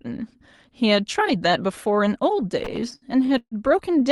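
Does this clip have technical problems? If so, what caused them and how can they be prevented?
Yes. From 2.59 to 3.55 s the speech suffers repeated stalls (stutter): the jitter buffer ran dry 11 times as packets arrived late, and the receiver stretched the last sound to cover each wait, the longest about 141 ms. Roughly a third of that stretch, 320 ms in total, is filled this way, so the speech drags and stutters but loses nothing. A spectrogram shows repeated, smeared horizontal bands, and the waveform shows looped, fading segments. The call path carries a 12 kHz bandwidth throughout, and the stalls stand out as the only disruption. Preventing this requires a steadier network path, or a jitter buffer allowed to grow earlier to absorb late packets.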